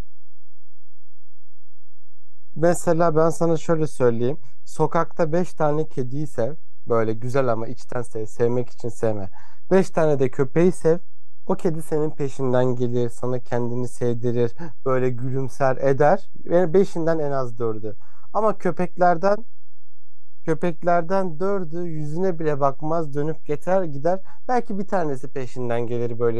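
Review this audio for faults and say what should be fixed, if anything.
DC offset runs throughout the speech, the whole waveform sitting off zero by a constant of about -19 dBFS. It isn't heard as a sound itself, but it eats headroom and shows as steady energy at 0 Hz. Removing it with a high-pass filter at the input, or fixing the interface's bias, prevents it.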